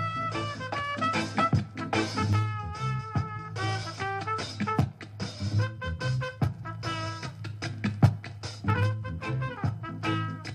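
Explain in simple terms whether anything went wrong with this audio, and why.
USB whine comes in at 6.7 s and lasts to the end: a faint, steady, high-pitched tone at 1 kHz, loudest at 3 kHz. The USB connection draws power in bursts a thousand times a second, and that electrical pulsing leaks into the recording as a tone.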